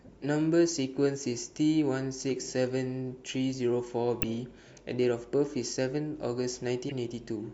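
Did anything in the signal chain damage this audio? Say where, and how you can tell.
Yes. Compressed frames skipped at about 4.22 s: the speech jumps forward by only a few milliseconds. That jump shows the damage sits at the codec stage. Frames were missing from the stored stream or rejected by the decoder as damaged. The decoder then joined the neighbouring frames together, so the audio skipped ahead by the length of the frames left out.

A corrupt frame was decoded from 6.89 to 6.92 s. It is a brief error, roughly one frame long, with energy at frequencies that don't belong to the speech and peaking around -25 dBFS. Flipped bits in the compressed data, from storage or transmission, reached a decoder that accepted the frame. It then applied wrong gains or misread spectral codes, producing this error for the duration of the single damaged frame.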